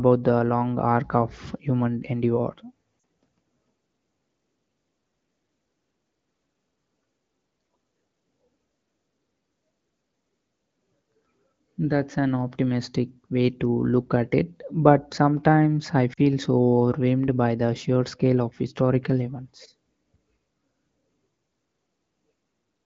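At 2.99 s, just after "arc of human endeavor", and again at 16.13 s, after "it but sometimes I", the speech briefly fades to near silence for about 40 ms, which fits two lost 20 ms AMR speech frames. The wideband AMR decoder bridges each gap by reusing the previous pitch and vocal tract settings at falling gain. On a spectrogram, the harmonics smear flat and fade across the gap, and the waveform envelope sags before recovering.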